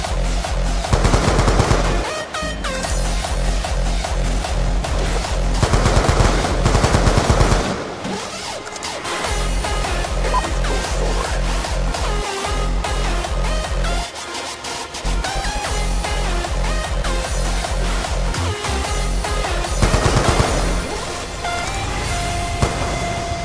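No faults can be heard anywhere in this recording.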